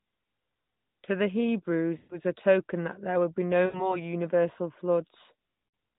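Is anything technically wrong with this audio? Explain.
Yes, there are lost AMR speech frames: around 1.98 to 2.19 s just before "a token that there", 3.66 to 3.99 s right after "that there would be", and 5.68 to 5.78 s. The radio errors corrupted frames, so the decoder stretched the last good sound with falling gain. That gives a drawn-out, fading smear of about 120 ms, about 80 ms, and about 60 ms scattered over 100 ms, followed by a briefly weak or rough return. All of this sits inside narrowband AMR audio capped at 4 kHz.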